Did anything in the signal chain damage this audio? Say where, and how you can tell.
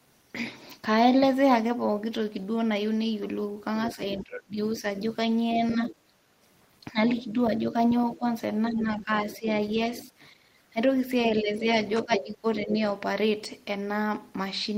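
Yes, in call processing: a likely incomplete echo cancellation lets the other side's voice leak through at 3.77–5.92 s, 7.3–10.09 s and 11.57–12.74 s, roughly 5 to 20 dB below speech.

Speech is suppressed in double talk at 3.96–5.92 s, 6.91–9.48 s and 10.73–12.76 s. The canceller likely ducks the talker, with dips up to about 25 dB.

The echo canceller gates the background at 6.2–6.41 s and 10.33–10.45 s, clamping the microphone about 11 dB so the room sound briefly drops out.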